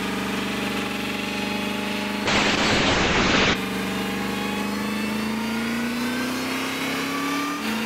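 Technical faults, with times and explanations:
2.27 to 3.61 s, call bitrate drop: the encoder's rate falls, fitting roughly 96 to 6 kbps. Coarser coding and an 8 kHz cut-off muffle the audio until it recovers.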